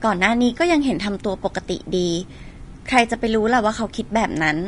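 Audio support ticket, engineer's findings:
Speech, grainy and hissy throughout, treble roughened, consonant attacks smeared, nothing above about 10.6 kHz. Likely Vorbis compression at a low bitrate, around 36 kbps: coarse residue quantisation turns fine high-frequency detail into noise, and the encoder's lowered cut-off chops the top end.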